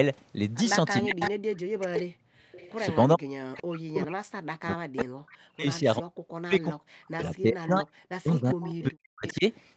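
From 1.02 to 2.53 s the speech dips and breaks up, at its deepest by about 40 dB across roughly a second. This is speech suppressed in double talk, likely from an echo canceller ducking both sides while the far end also spoke. Inside that stretch a repeat of the speech surfaces at 1.2 to 1.3 s, about 5 dB below it, and again at 1.81 to 2.02 s at about 10 dB down. A weaker one follows at 2.52 to 2.97 s, around 25 dB down. Each trails the original by 393 ms. This is echo leak, likely loudspeaker sound the canceller failed to remove and sent back. From 3.15 to 9.45 s the suppression returns, with repeated cuts totalling around five seconds and again reaching about 40 dB. Within that span more scraps of the 393 ms echo slip through at 5.33 to 5.37 s (about 30 dB down), 8.49 to 8.82 s and 9.28 to 9.34 s (both about 20 dB down). Throughout, the call's microphone processing trims the lowest bass, and nothing sits above 8 kHz.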